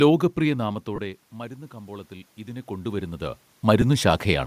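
From 0.43 s to 4.42 s the speech and the room noise behind it swell together, slowly climbing by about 7 dB. This is automatic gain rising: the level reaching the microphone fell by about 16 dB, partly as the talker moved away, and the gain control compensated gradually.

At 0.96 to 0.98 s the speech briefly turns into a grainy, noisy smear for about 22.5 ms, and again at 3.82 s for about 7.5 ms. These are lost LE Audio frames, which fits three 7.5 ms frames and then one. The LC3 decoder filled each gap by repeating the last spectrum with scrambled phase. The faint breathy edge in the upper band is likely from the light LC3 compression.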